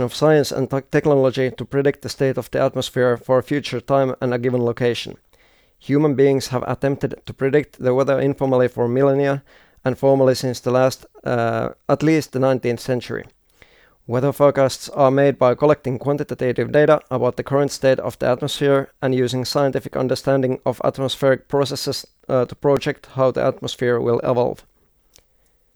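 Processor overload crackle runs from 22.46 to 22.85 s. The processor falls behind on very short buffers, only a millisecond or two each, and misses several deadlines in a row. Each miss replays a scrap of old audio with hard edges, so the speech takes on a gritty, tearing crackle until the load eases.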